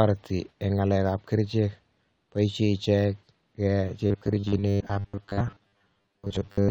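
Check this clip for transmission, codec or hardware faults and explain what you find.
One fault is present: robotic sound from repeated short buffers, from 4.07 s to 6.71 s. The likely cause is that new audio stops arriving often enough, so the playback side keeps replaying the most recent fragment to fill the gap and about half of the real signal is skipped. The replays repeat at 100 Hz, which fits a buffer of about 10 ms. That imposes a fixed 100 Hz buzz, turning the speech into a rigid, metallic buzz that only loosely tracks the original.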